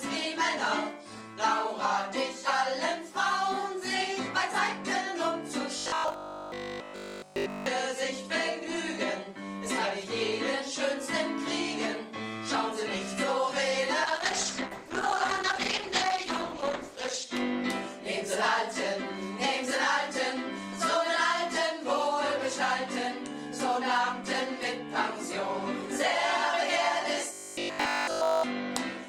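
Robotic sound from repeated short buffers, likely caused by audio arriving too seldom so that essentially all of it is replaced by looped fragments, turns the sound into a rigid 50 Hz buzz from 5.78 to 7.66 s and again from 27.33 to 28.45 s; that rate fits a 20 ms repeat. A call bitrate drop from 32 to 11 kbps, held at its lowest for 3.18 s, makes the audio coarse and duller from 14.07 to 17.33 s.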